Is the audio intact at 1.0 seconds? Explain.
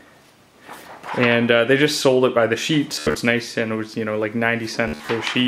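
Yes, the audio is intact at 1.0 seconds, with nothing there to disturb the sound.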